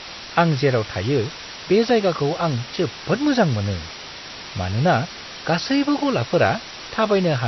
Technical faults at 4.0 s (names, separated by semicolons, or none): low bit depth with dither; MP3 compression